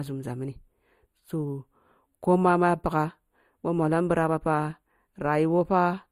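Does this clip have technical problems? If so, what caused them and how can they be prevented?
Yes. Channel delay (comb filtering) runs throughout the speech. One channel arrives a few samples late, roughly a tenth of a millisecond, and when the two are summed to mono they cancel around 5 kHz and 15 kHz, leaving a hollow, dulled upper range. Prevent it by time-aligning both channels before any mono fold-down.

Transcoding between lossy codecs is also heard throughout. Two layers of coding artefacts sit together, and nothing is present above 18.2 kHz. This likely comes from a low-rate MP3 being re-encoded to Opus, with the second encoder spending bits on the first one's damage. Prevent it by encoding once from an uncompressed source.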